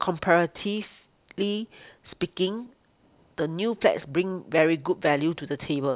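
No technical faults can be heard in this recording.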